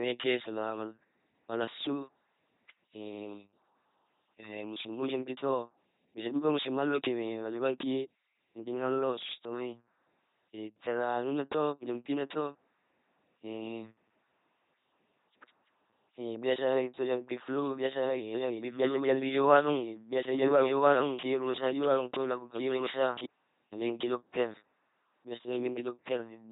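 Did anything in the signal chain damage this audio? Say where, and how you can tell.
Yes. The codec stage damaged the whole clip. The speech throughout has the buzzing, mechanical robot quality of an LPC-10 vocoder, with heavy damage and nothing above 3.8 kHz, which fits the 2.4 kbit/s LPC-10 format. Each stretch is rendered either as a pulse-driven buzz or as noise through a ten-pole vocal tract filter, so wrong voiced/unvoiced decisions turn into stray buzzes or hiss.

From 16.77 s to 23.27 s the speech is heard twice. A full-band doubled audio track runs about one and a half seconds behind and about 5 dB quieter. It has no decay or room colour, and it starts and stops abruptly at those boundaries. That points to a copy rather than an acoustic echo. The likely cause is a second, slower capture path or an edit that left two copies out of step.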